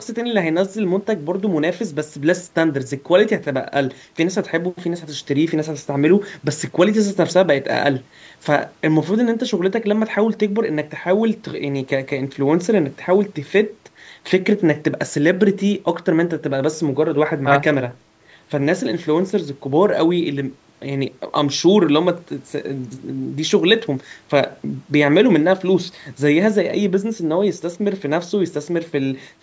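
No technical faults can be heard in the speech; it carries the ordinary signature of call microphone processing, with the lowest bass trimmed and nothing above 8 kHz, as expected for that path.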